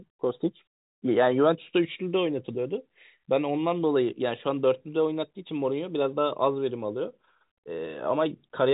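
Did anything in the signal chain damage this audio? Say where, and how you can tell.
No, the speech arrives intact over what sounds like a standard 64 kbps mu-law telephone channel, with the band stopping near 3.8 kHz and only the faint level-following hiss that G.711 coding always leaves.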